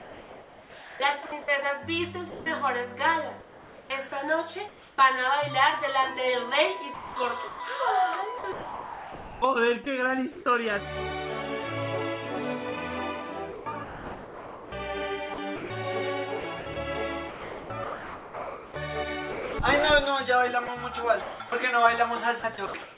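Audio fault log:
0.00–4.98 s, 6.94–10.46 s and 13.52 s to the end, sound chopped by the voice detector: the audio keeps cutting in and out. Roughly 2.1 s, 1.4 s and 3.4 s of real sound in those stretches get swapped for comfort noise, so quiet edges vanish. The likely cause is the sender's voice detector toggling transmission on and off, heard over a call path that stops at 4 kHz.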